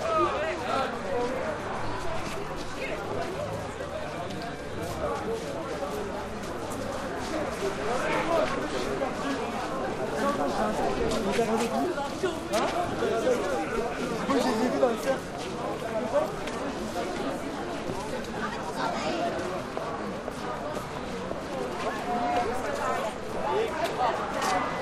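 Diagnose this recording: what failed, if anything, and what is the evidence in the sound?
From 9.94 s to 10.82 s the sound plays 5.58% fast and rises 94 cents, nearly a semitone, then returns to its original speed and pitch. This is likely a drift correction step at the driver or buffer stage, where clock-matching software changed the playback rate in one jump to manage its buffer. On a spectrogram, every band steps up together for that span and then drops back. On the waveform, events inside it appear slightly compressed in time.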